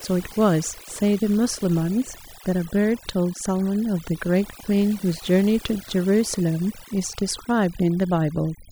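Throughout the speech, the background collapses to near silence dotted with twinkling specks. This is overdone noise removal: a denoiser set too strong switched off individual frequency bands near its noise estimate, taking quieter parts of the voice with them.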